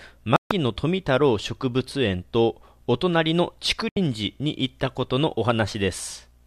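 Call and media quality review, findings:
Digital broadcast dropout, 0.36–0.51 s: receiver lost lock or rejected corrupt frames and muted until valid ones arrived. Speech cuts to silence for 144 ms, consistent with roughly six 24 ms frames discarded.

Digital broadcast dropout, 3.89–3.97 s: same receiver mute on failed frames. Shorter hole of 72 ms, fitting about three frames. Programme resumes mid-flow; audio transmitted during both gaps is unrecoverable.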